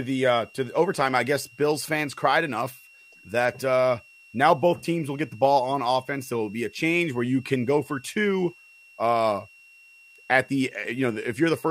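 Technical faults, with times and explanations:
Throughout, switching supply whistle: a thin, steady whistle sits under the speech, wandering slightly between about 2.72 and 2.75 kHz. It stays roughly 30 dB below the speech. A switching power supply is cycling at an audible rate, and that ripple leaks into the audio. The small pitch drift follows changes in the supply's load.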